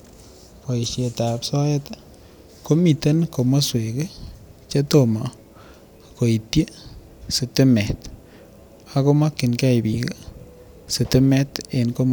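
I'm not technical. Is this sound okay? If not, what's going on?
Yes, there's nothing wrong with this recording.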